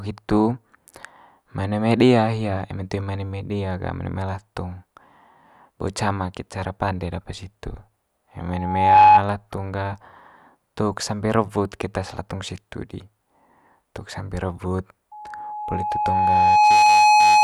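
At 8.50 s a loudspeaker feedback squeal rises out of the speech: a single tone near 844 Hz swells over roughly half a second to around 15 dB above the voice and stops at 9.23 s. The microphone is picking up its own loudspeaker, and at that frequency the loop gain tops one. It returns at 15.11 s on the same pitch, climbing more slowly, over about a second and a half, to around 10 dB above, and runs to the end. Unlike a steady hum or tone, it grows by itself.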